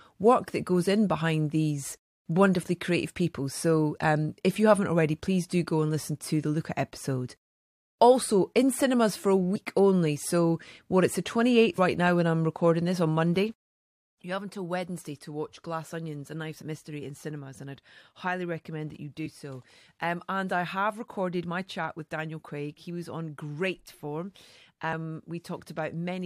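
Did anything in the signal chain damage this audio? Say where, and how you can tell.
Yes. Compressed frames skipped at 11.78 s, between "what it's the" and "now when I'm recording", and again at 16.61 s. This is codec or storage damage. Roughly 70 ms of sound vanishes each time, about three frames of 23.2 ms.

A sudden gain jump at 14.10 s drops the level by about 10 dB, and it stays down to the end. Sound and background noise fall together within a single sample, which points to digital gain in the processing or driver stage. The likely cause is a gain setting applied without a ramp.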